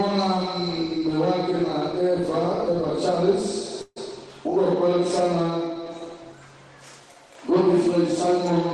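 A call audio freeze runs from 3.81 to 3.98 s: the sound stalls, the last moment is stretched into a fading buzz that ends in about 30 ms of silence, filling about 150 ms in all before the audio resumes exactly where it left off. Nothing is lost, but everything after it now plays about 150 ms later. The likely cause is packets delayed in transit, leaving the receiver's jitter buffer empty so it had to fill the wait itself.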